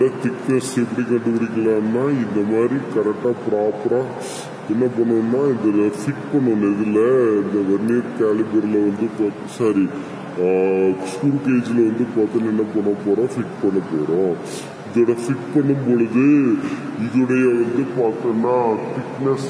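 Wrong sample rate runs through the whole clip, from the first moment to the last. The samples are being played back slower than they were captured, with no conversion between the two rates. Everything runs at about 0.69 times normal speed and sits about 6.45 semitones lower, so the audio drags and sounds heavy and dark. That ratio fits material recorded at 32 kHz but played at 22 kHz.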